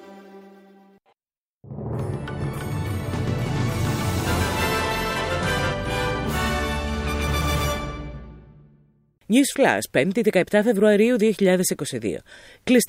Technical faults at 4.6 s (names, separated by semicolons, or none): doubled audio track